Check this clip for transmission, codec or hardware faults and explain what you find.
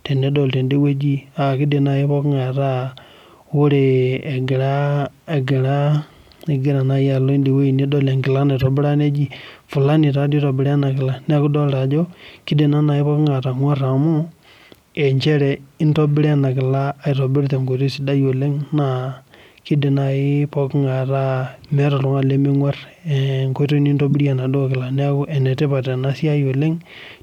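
Two short corrupt frame decoded faults occur in the speech, at 8.60 to 8.64 s and 24.11 to 24.14 s. Damaged bits in compressed frames were decoded anyway, so misread gains and codes scatter energy to wrong frequencies. Each is heard as a brief chirp or noise burst lasting a few frames. The second is louder, peaking near -10 dBFS against about -15 dBFS for the first.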